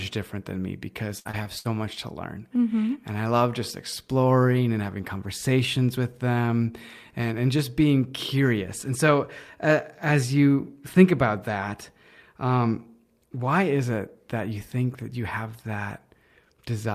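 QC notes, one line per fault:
1.19–1.67 s, repeated packet loss (robotic sound): right after "different than me because", the audio breaks up into four short holes, the longest about 57 ms. About a third of this half-second stretch is patched by stretching out the previous sound, roughly 150 ms in total. Because one hole follows quickly after another, the repeated fill gives a choppy texture with pieces clipped out. Clean audio returns at "much to learn".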